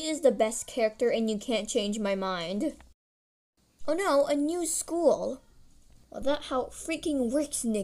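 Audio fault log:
No faults heard.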